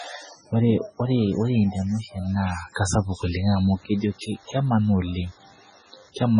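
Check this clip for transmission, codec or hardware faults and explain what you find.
Two faults are present: coding damage across the whole speech clip, and a buzz in its second half.

Throughout, the speech sounds watery and swirly, with heavy smearing and nothing above 10.3 kHz, which points to a very low bitrate near 16 kbps. The likely cause is MP3 compression, which drops weak frequency lines frame by frame. A spectrogram shows a hard ceiling and flickering, patchy bands.

From 3.51 to 6.09 s there is a DECT cordless phone buzz: a thin, steady 100 Hz tone with many harmonics, well below the speech. It comes from 10 ms radio bursts rectified by the audio circuit. A spectrogram shows evenly spaced horizontal lines, and the waveform shows a regular 10 ms ripple.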